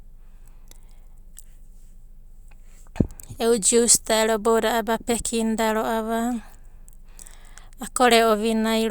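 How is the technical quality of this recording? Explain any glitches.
The technical quality of the recording is sound, with no glitches to explain.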